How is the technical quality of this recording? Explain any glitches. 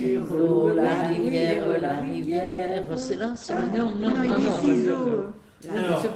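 The recording has a cluster of network-related call faults in its middle section. A brief stall and two small dropouts are followed by a longer stretch of degraded, band-limited audio.

Call audio freeze, 2.43 to 2.60 s: For about 150 ms the sound does not advance. The last moment is stretched into a fading, buzzy continuation rather than silence. When normal playback resumes, it picks up exactly where it left off, so nothing is lost, but everything afterwards runs about 150 ms later. This is likely packets stalling in transit and the jitter buffer running dry, with the receiver synthesising filler until they arrive.

Short concealed packet loss, 2.66 to 2.69 s and 2.83 to 2.99 s: Each event drops about 20 ms of real audio that never reached the decoder. The receiver patches the hole by extrapolating the preceding sound, then crossfades back into the incoming stream. This is heard as a quick smear or wobble rather than a clean gap. 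The second patch also shifts timing by a few milliseconds. A very short transient falling in either hole could disappear.

Call bitrate drop, 2.93 to 5.30 s: The encoder rate falls from 32 kbps to 11 kbps and stays at the bottom for roughly 1.8 s before recovering. The bandwidth estimate has collapsed, so Opus codes much more coarsely. It also narrows the audio band from 20 kHz to 8 kHz. The result is a muffled, rough and watery quality, with the top end missing until the rate climbs back.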